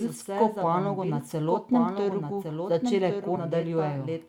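A speech recording carries a doubled audio track throughout: a full-band copy trails about a second behind, roughly 5 dB quieter, with no decay or room colour unlike a real echo, likely from a second capture path. At 3.35 to 3.38 s a stream segment is skipped, likely a failed segment load: the sound jumps ahead with a small blip rather than falling silent as in a dropout.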